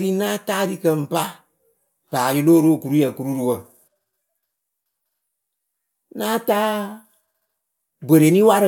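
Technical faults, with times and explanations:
Nothing stood out on listening to this speech recording.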